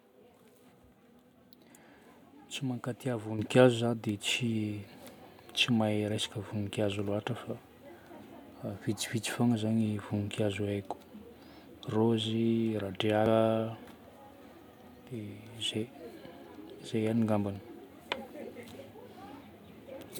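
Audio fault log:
3.39 s, microphone volume stepped up: the speech and the background behind it jump louder together by about 8 dB in a single instant, and stay there, because the call software judged the microphone too quiet and raised the device's input volume in one step.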